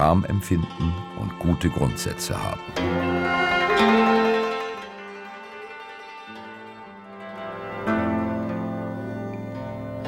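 No technical faults can be heard in this audio.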